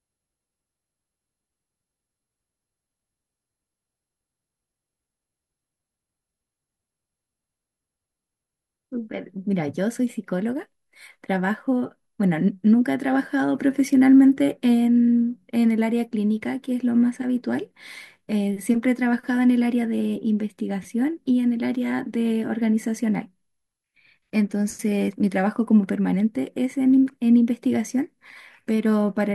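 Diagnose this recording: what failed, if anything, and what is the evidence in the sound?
Nothing in this speech recording points to a failure at any stage, so there's no diagnosis to give and nothing in the sound to chase down.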